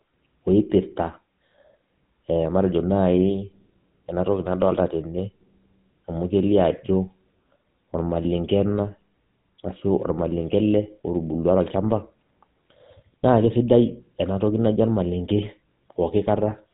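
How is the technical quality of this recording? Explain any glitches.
The quality is held back by one problem running the whole way through: the speech has gone through a GSM full-rate codec, and the damage is plainly audible. From start to finish, the codec models the vocal tract and drives it with a sparse, regularly spaced pulse train, keeping just a third of the excitation. That gives the voice its gravelly, buzzy roughness. Nothing gets through above 4 kHz, so the speech sounds dull and boxed-in, which fits an old 13 kbps phone-network stream.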